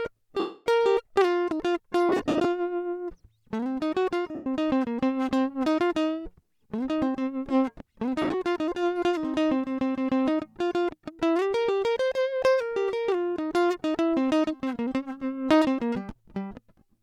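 Lost LE Audio frames at 0.39–0.66 s, 2.09–2.45 s, 4.35–4.46 s and 8.22–8.34 s: the LC3 decoder repeats the last spectrum with randomised signs. Tones blur into a noisy smear that fades during the longest gap. The second and fourth are clusters of brief dropouts.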